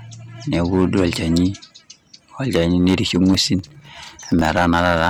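Hard clipping runs through the whole speech clip. It's driven about 11 dB past the limit, so a small share of peaks get flattened into harsh crackle. From 3.34 to 4.51 s there's processor overload crackle too. Dozens of tiny buffers, each around a millisecond and a half, miss their deadline and drop to silence, giving a gritty tearing.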